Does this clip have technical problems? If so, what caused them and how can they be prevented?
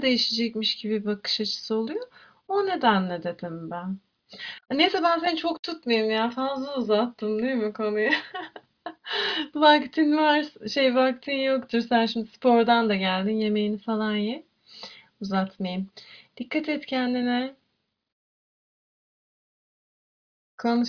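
No, there are no technical problems in this clip.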